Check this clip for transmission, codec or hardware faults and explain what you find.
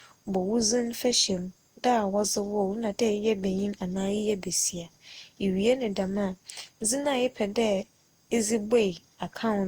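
There is one codec fault, present throughout the speech. Generation loss: swirly, hollow, smeared tone with blurred attacks, likely from about ten successive Opus encodes near 64 kbit/s. Unlike a single low-bitrate pass, the band still reaches 20.3 kHz, yet the damage keeps accumulating.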